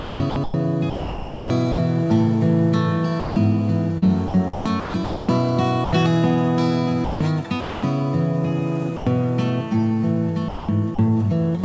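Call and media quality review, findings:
Sound chopped by the voice detector, four stretches: 0.00–1.78 s, 3.98–5.29 s, 7.05–7.83 s, 10.49–10.99 s. Sound flickers on and off. Roughly 1 s lost in the first stretch, 0.6 s, 0.38 s and 0.24 s in the others. Likely sender VAD toggling repeatedly, quiet parts gated and filled with comfort noise.

Sound dropped by the voice detector, three gaps: 3.20–3.36 s (160 ms), 5.85–5.93 s (80 ms), 8.97–9.07 s (100 ms). Sound gives way briefly to steady noise, then returns. Likely sender VAD misclassifying quiet sound as background and stopping transmission, receiver playing comfort noise. Band-limited call audio, nothing above 8 kHz, consistent with G.722 at 64 kbps.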